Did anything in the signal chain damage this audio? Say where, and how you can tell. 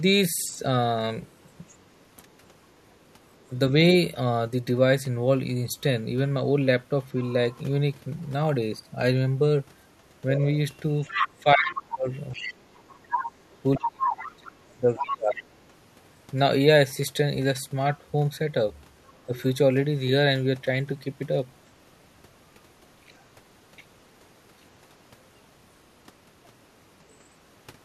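Yes. Other side's voice leaking through: a faint second voice at 1.26–3.26 s, 19.1 s and 27.1 s, and a loud one at 10.36–15.58 s. This is likely residual loudspeaker echo the call-processing echo canceller missed.

Speech suppressed in double talk: the talker drops sharply, by roughly 30 dB, across 11.43–15.5 s, with a slight dip at 19.3 s. This is likely the echo canceller ducking both voices during overlap.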